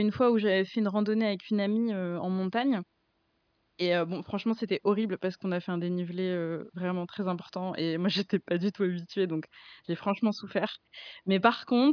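No technical faults can be heard anywhere in the speech. Nothing interrupts or alters the audio at any point.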